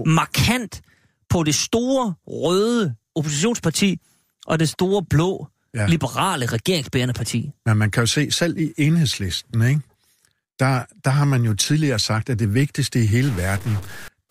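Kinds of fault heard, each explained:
Stuck bit: From 13.22 to 14.08 s, just after "at det vigtigste i", the speech turns harsh and buzzy, likely because one sample bit was held fixed by a faulty line or converter. Many samples are pushed off by that bit's weight, a step of about -30 dBFS. On a waveform the trace shows jagged steps riding on the signal, and a spectrogram shows broadband hash smeared across all frequencies for that stretch.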